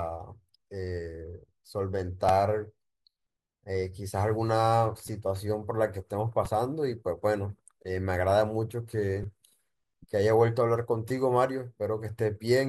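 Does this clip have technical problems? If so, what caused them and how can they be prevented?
Yes. Repeated buffer clicks occur at 2.29, 5.08, 6.45, 9.23 and 11.09 s. Late audio made the device replay its last 5.33 ms buffer, which fits 256 samples. Prevent it by enlarging the buffer or easing processing load.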